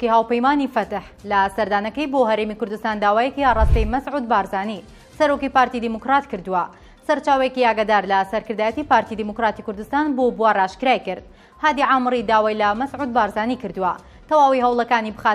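Nothing is technically wrong with this audio.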